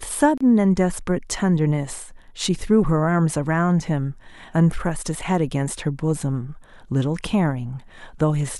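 At 0.38 s the speech drops out for about 30 ms, resuming at 0.41 s. This is a gap at a join of encoded pieces. The audio was encoded in separate sections and spliced without removing the encoder's start-up delay or the padding on the final frame, so a short run of silence sits inside continuous speech. The edges of the gap are smeared by the codec, and the speech picks up exactly where it broke off.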